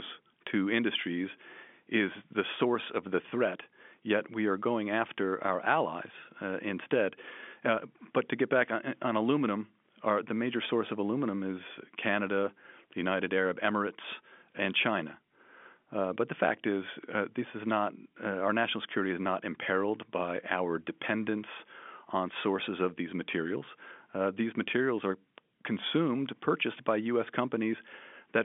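Nothing goes wrong anywhere in this speech, which just carries the familiar narrow sound of G.711 telephone coding, with the line band sitting between about 200 Hz and 3.5 kHz and nothing getting past 3.7 kHz.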